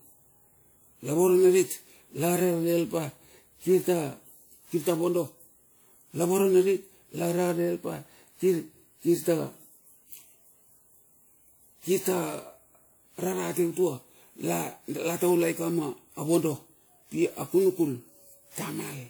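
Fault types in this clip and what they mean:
generation loss: the speech sounds swirly, hollow and smeared, with blurred consonant attacks, yet its bandwidth extends up to 20.1 kHz. That mismatch sets it apart from a single low-bitrate encode and points to likely repeated lossy re-encoding, about seven passes at WMA 96 kbit/s.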